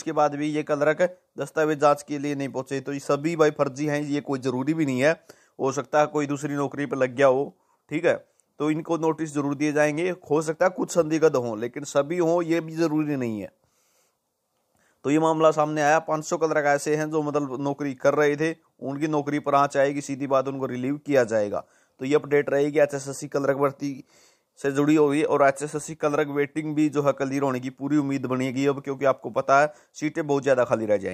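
No technical faults can be heard anywhere in the recording. There are no dropouts, interruptions or other disturbances at any point.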